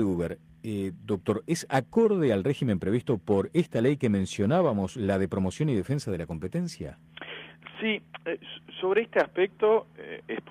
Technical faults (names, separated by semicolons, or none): none